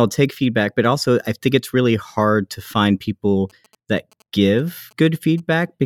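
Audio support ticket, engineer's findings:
GSM signalling bursts, 3.50 to 5.63 s, after "hard to find people". Galloping dit-dit-dit ticks and short 217 Hz buzzes, roughly 30 dB below speech. Nearby 2G phone signalling. Radio bursts rectified in audio circuitry.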